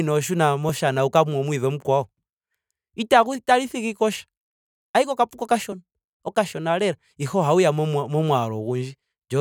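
At 0.69 s and 5.72 s the speech jumps, a likely dropped buffer (overrun) splicing out a millisecond or two without silence.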